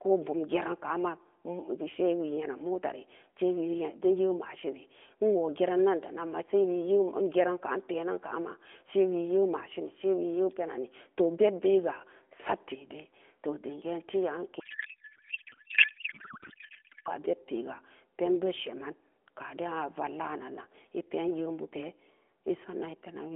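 A codec payload misread runs from 14.60 to 17.09 s: the decoder unpacks the AMR narrowband frames with every field shifted, which fits octet-aligned packing being read as bandwidth-efficient, so the speech turns into garbled noise and warble that barely tracks it.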